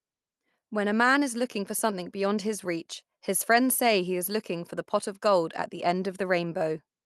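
No technical faults are audible in this speech.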